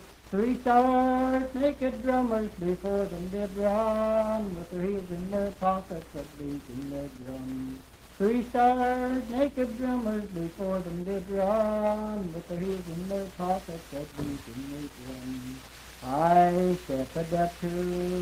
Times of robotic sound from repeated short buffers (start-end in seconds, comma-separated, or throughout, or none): none